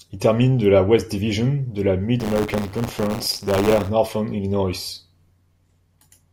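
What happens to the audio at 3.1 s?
At 3.1 s the speech is inside a stretch of buffer tearing that runs from 2.19 s to 3.90 s, starting just after "de la". The writer and the playback hardware have drifted so they cross mid-buffer, leaving a small slice of each period, around 7%, filled with audio from roughly 40 ms earlier, with hard joins on both sides. The result is a steady robotic 100 Hz rattle that follows the signal. A dropout, by contrast, would leave silent gaps.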